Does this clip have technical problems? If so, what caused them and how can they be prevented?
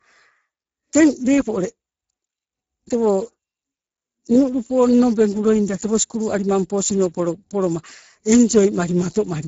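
Yes. Speex codec damage runs through the whole speech clip. The speech sounds noisy and hoarse, because the codec has too few bits to rebuild the voice excitation. The damage fits a bitrate near 10 kbps. Nothing is present above 7.6 kHz. To prevent it, encode at a higher Speex quality setting or use a more modern codec.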